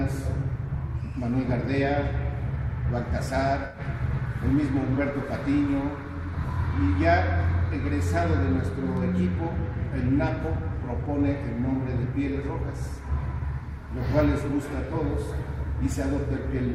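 AAC frame loss with concealment at 3.65 to 3.80 s: roughly 85 ms of data, fitting about four frames, went missing, and the decoder patched the gap from the last good spectrum, leaving a brief smeared, phasey patch.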